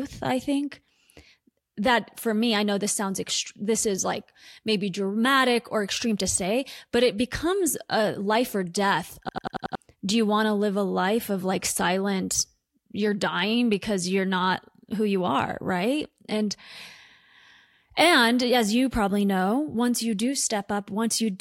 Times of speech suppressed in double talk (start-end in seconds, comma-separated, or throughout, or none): none